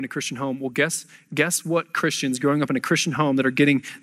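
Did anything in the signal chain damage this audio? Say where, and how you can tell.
Yes: automatic gain rising in call processing after "guess guess", 1.62 to 3.9 s, speech and background swelling together by about 5 dB, a slowly widening waveform envelope.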